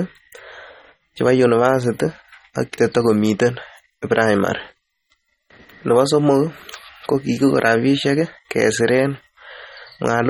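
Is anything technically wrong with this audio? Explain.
Yes. Throughout, the speech sounds watery and swirly with metallic chirps on s sounds and nothing above 18.7 kHz, likely MP3 compression at a starved bitrate, which fits about 32 kbps.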